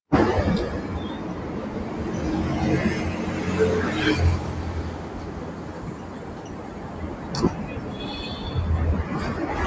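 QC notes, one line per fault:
throughout: noise suppressor applied to music or sounds. A suppressor built for speech stays active over these sounds. It mistakes steady, sustained parts for background noise and turns them down. The level swings by roughly 10 dB as it clamps and lets go. Sharp onsets get through, but held portions and decaying tails sink away. That is why the sound pumps and thins out. The call microphone processing cuts everything above 8 kHz, which is expected for that path.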